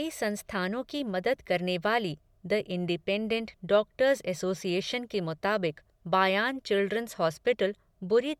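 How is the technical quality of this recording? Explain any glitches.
No technical glitches can be heard anywhere in the recording. There is nothing here that needs explaining.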